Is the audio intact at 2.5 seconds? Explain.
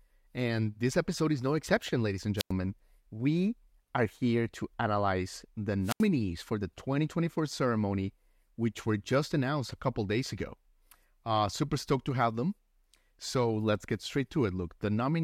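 No. Right after "no exception ladies and", a wireless microphone squelch dropout runs from 2.37 to 2.52 s. The analogue FM radio link fades, a brief rise of hiss is heard, and the receiver's squelch then mutes the output for about 96 ms of near silence before the speech returns. On a waveform this shows as a short fuzzy stretch collapsing to a flat line. A spectrogram shows a thin band of broadband noise followed by an empty vertical gap.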